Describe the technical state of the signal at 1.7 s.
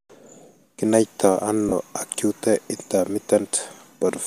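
Lost LE Audio frames at 1.69 to 1.72 s leave a 30 ms gap, which fits three 10 ms frames. The decoder fills it by repeating the last spectrum with randomised signs, so the sound turns into a brief noisy smear rather than dropping to silence or clicking.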